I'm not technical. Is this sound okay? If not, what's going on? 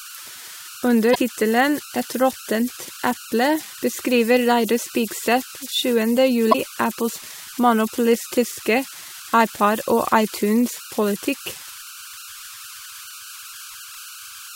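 No. Two things are wrong. The first is converter idle tones, present throughout the speech. The recording converter falls into a repeating pattern when the sound is quiet, which produces a whistle of about 1.5 kHz in the pauses and a grainy hiss under softer passages.

The second is damaged data in a compressed stream, at 1.11 s and 6.49 s. Each lasts about 60 ms. Part of the file there is corrupted, so the player briefly loses its place and you hear a short squawk or blip.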